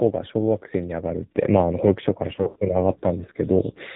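Throughout, the speech carries the AMR narrowband mobile codec: nothing above 4 kHz, with a heavily buzzy, synthetic tone consistent with its 5.9 kbps mode, unlike plain band-limiting, which stays natural. From 2.36 to 2.57 s, lost AMR speech frames make the voice smear into a stretched, fading buzz rather than clicking or cutting to silence. The pattern suggests several dropouts, the longest about 80 ms.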